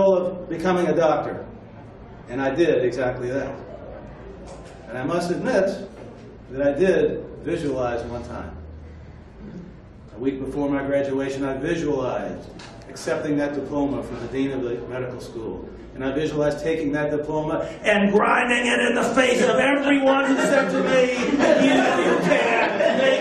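No technical faults can be heard anywhere in the audio.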